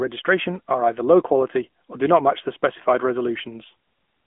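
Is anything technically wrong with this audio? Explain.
Yes. AMR narrowband mobile codec damage runs throughout: the speech is confined to roughly 200 Hz to 3.5 kHz and rebuilt from a vocal-tract model driven by sparse pulses, in a way that fits a 10.2 kbit/s mode, leaving it thin, plainly buzzy and synthetic.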